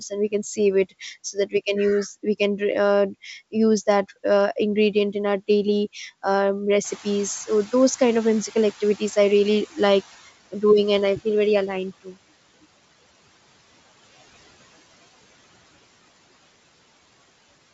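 Between 1.33 and 1.54 s, a brief stretch of the speech turns faint and swallowed, dropping by about 13 dB over roughly a tenth of a second. This is speech cut by the noise suppressor. The suppressor mistook low-level speech energy for background noise and pulled it down along with the noise floor, so the softer detail loses its presence.

At 6.84 s, just as the room noise jumps by about 15 dB, that noise comes through with less reduction than before. It then sinks gradually until 10.29 s. This is the noise suppressor catching up. The noise estimate needed about 3.45 s to adapt to the higher level before the suppressor could again apply its full reduction of about 15 dB.

From 12.04 to 12.15 s, speech is cut by the noise suppressor again. This dip is deeper, about 15 dB, and again lasts roughly a tenth of a second, leaving that moment sounding swallowed and faint.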